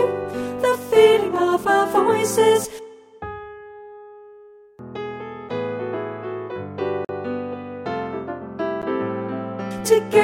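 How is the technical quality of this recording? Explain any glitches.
Four short dropouts mar the recording. Blocks of digital silence occur at 1.36 s, 5.49 s, 7.05 to 7.09 s and 8.82 s, where samples were zeroed, likely because the output buffer went unfilled in time. The 2.7 and 5.6 ms gaps tick, the 11.6 ms gap, which fits a 512-sample buffer, also ticks, and the 44 ms gap is an audible hole.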